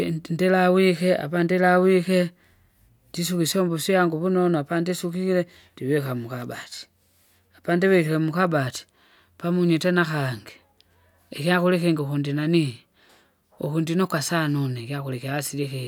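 No technical faults occur at any point in the speech, so there are none to describe in time order.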